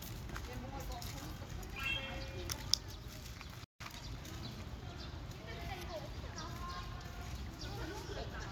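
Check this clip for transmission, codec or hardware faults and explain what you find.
Two faults show up close together: a playback stall followed by a time-compressed catch-up.

Playback stall, 3.64 to 3.81 s: the sound stops abruptly in mid-flow and the output goes silent for about 160 ms before resuming. The likely cause is the player running short of data or having its output thread held up. The output stays empty until the stream recovers, producing a clean hole rather than a fade.

Time-compressed catch-up, 3.81 to 4.45 s: as soon as output returns, the player works off the backlog built up during the gap by trimming small slices and cross-fading across the joins. Over this stretch the audio runs at 1.25 times normal speed while keeping its original pitch. It sounds hurried, and settles back to normal pacing after 4.45 s.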